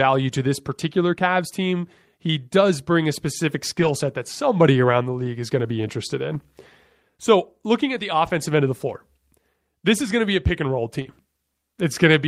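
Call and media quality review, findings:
Lost packet rebuilt from error correction: short rough, noisier patches with no gap at 3.79–3.89 s, 5.21–5.27 s, 6.33–6.35 s, 8.27 s and 11.05–11.11 s. The lengths fit one to three 20 ms frames. In the Opus receive path, the decoder plays low-bitrate in-band FEC copies. It differs from concealment because the real content survives, only coarser.

Short concealed packet loss: a brief smear at 11.01–11.07 s, about 40 ms missing. The jitter buffer or decoder fills the hole by extending the preceding sound, so the original content there is replaced by a guess rather than a degraded copy. It runs straight into the FEC-rebuilt stretch ending at 11.11 s.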